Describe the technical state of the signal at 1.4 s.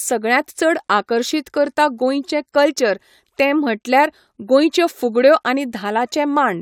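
At 1.4 s the speech signal is intact, with no audible dropout, distortion or other fault.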